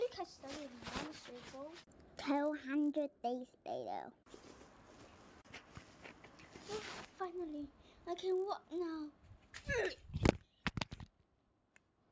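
A steady buzz at 50 Hz rides on the sound for the whole clip, present only while there is signal and gone in the gaps. It comes from a resampler restarted on every block: the 24 kHz to 16 kHz conversion was run on each 20 ms block separately, so at every block edge the converter lacked the real neighbouring samples and left a small error. Those errors repeat fifty times a second and fuse into the buzz.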